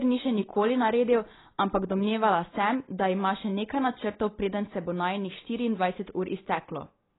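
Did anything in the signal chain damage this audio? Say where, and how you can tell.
Yes. Throughout, the speech sounds dull, smeared and fizzy, with nothing above 3.9 kHz. The likely cause is heavy AAC compression at the codec stage, in keeping with a bitrate around 16 kbps.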